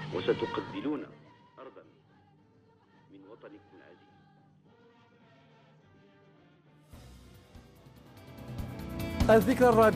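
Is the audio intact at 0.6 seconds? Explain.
No. At 0.6 seconds the sound is inside a stretch of zipper noise running from 0.49 to 1.53 s. The level falls by roughly 25 dB in unsmoothed 2 dB steps, about ten per second, and each step clicks. That ticking is what distinguishes it from a clean, gliding fader move.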